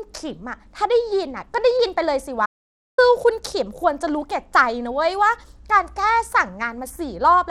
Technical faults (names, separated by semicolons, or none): Bluetooth SBC compression; audio dropout to silence